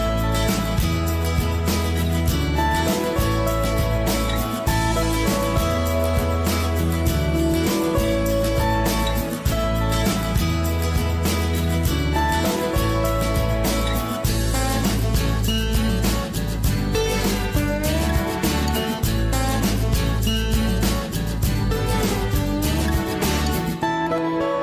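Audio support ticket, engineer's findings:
No audible faults found.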